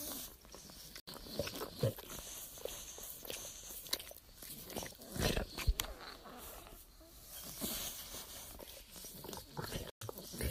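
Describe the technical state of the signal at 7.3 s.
At 7.3 s the audio is intact, with no technical fault present at that moment.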